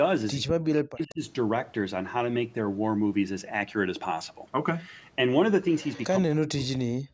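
From 0.42 to 1.21 s, speech is suppressed in double talk: with both sides likely talking at once, the echo canceller cannot tell the local talker from loudspeaker echo and turns everything down. The speech dips by as much as about 40 dB over most of that stretch, thinning and breaking into pieces. Near the end of that stretch, from 1.09 to 1.13 s, an echo leak appears: the far end's canceller likely misses part of what its microphone picks up from the loudspeaker and sends it back. The result is a brief scrap of the voice returning 136 ms late, about 25 dB below the speech. A second echo leak, likely from the same cause, runs from 5.78 to 6.04 s, a faint copy delayed 152 ms and again about 25 dB down. From 6.21 s to the end, the speech is again suppressed in double talk, likely as the canceller clamps both sides. The audio drops by up to about 40 dB, losing its top and cutting out in fragments across nearly a second. 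The call's microphone processing, which leaves nothing above 8 kHz, is not at fault.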